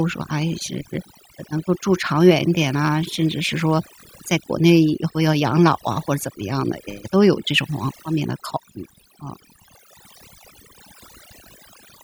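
From the very start and right through to the end, the speech carries overdone noise removal. The noise reducer was pushed too hard, so any frequency band sitting close to what it took for noise gets pulled way down or shut off entirely, and the softer bits of the voice get dragged out along with the noise. You hear it as a background that drops away and breaks up into little twinkling specks.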